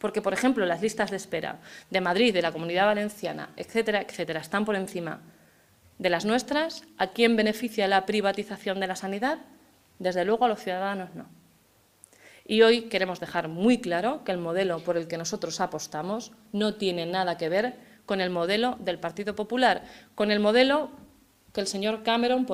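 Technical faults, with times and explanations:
Throughout: clock drift between sender and receiver. The sending device's audio clock runs roughly 2% slower than the receiver's, so samples arrive slightly behind the rate at which they are played out. The jitter buffer keeps draining, and the receiver must fill the shortfall by stretching or repeating short fragments. The result is a faint, persistent unsteadiness in timing rather than any single obvious break.
0.28 to 22.12 s: repeated timing corrections. To stay in step with the slow sender, the receiver repeatedly inserts short repeated pieces, all in the same direction and at uneven intervals. This amounts to playback at about 98% speed, adding roughly 0.4 s across the stretch. Each insertion is small, heard at most as a slight hiccup or a gently uneven tempo rather than a dropout.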